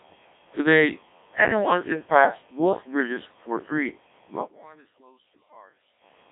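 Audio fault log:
Throughout, Codec 2 vocoder: the speech is resynthesised from sine waves using only pitch, voicing, energy and spectral envelope, so the original waveform is gone and it sounds heavily robotic and buzzy, fitting a rate near 1.3 kbit/s, with nothing above 3.8 kHz.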